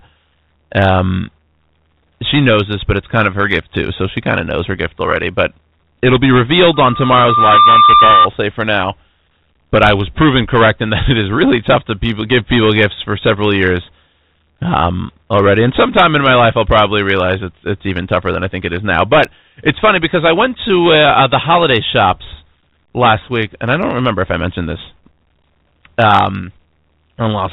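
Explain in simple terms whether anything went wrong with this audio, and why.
Two things went wrong. Throughout the speech there is hard clipping: the signal was driven too loud, so about one sample in twenty has its peaks chopped flat, producing a harsh crackle on loud syllables. From 6.74 to 8.28 s, between "it'll be" and "say for now", a loudspeaker feedback squeal appears: the microphone picked up its own speaker, and a 1.2 kHz tone swelled over about a second until it was louder than the speech.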